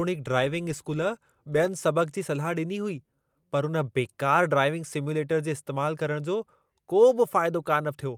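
Nothing goes wrong anywhere in this bit of speech, so there's no fault to point to at any moment.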